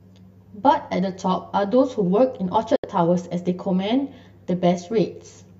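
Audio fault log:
throughout: channel delay (comb filtering). One channel trails the other by something like 10 ms, and the mono sum cancels at evenly spaced frequencies starting down around 40 Hz. That fixed row of notches gives the speech a hollow, phasey colour from start to finish.
2.76–2.84 s: digital broadcast dropout. The audio dips to silence with a very quick fade of about 3 ms and stays muted for roughly 72 ms before coming back, which fits a few corrupted frames being muted. Whatever was sent during that gap is simply gone.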